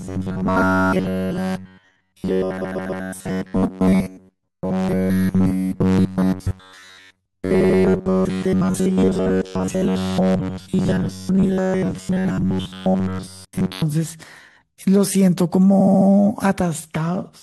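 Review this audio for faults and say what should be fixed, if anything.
From 0.01 s to 13.84 s the speech carries a rigid, metallic buzz at 93.8 Hz, the sound of robotic repeated short buffers. New audio is likely arriving too seldom, so playback refills the gap by looping the last fragment, roughly 10.7 ms long, across most of that stretch while the real audio is dropped. The loop period imposes the fixed pitch, with the words only loosely traceable. To prevent it, enlarge the jitter buffer and fix the upstream delivery stall so real audio is always ready.

Repeated frames cause three stutters. From 2.60 s to 3.02 s a 139.3 ms block plays three extra times, adding 418 ms. From 7.60 s to 7.78 s a 92.9 ms block repeats twice more, adding 185.8 ms. From 15.79 s to 16.07 s a 69.7 ms block returns four extra times, adding 278.6 ms. Each replay comes from duplicated compressed data. To prevent it, deduplicate frames by sequence number before decoding.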